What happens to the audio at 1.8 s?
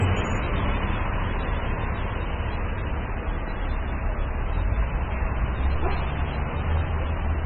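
At 1.8 s you're hearing what's likely heavy MP3 compression, and it runs through the whole clip. Nothing survives above about 7.8 kHz, and weak frequency lines keep dropping in and out between frames, giving a dull, watery swirl that fits a very starved bitrate around 16 kbps.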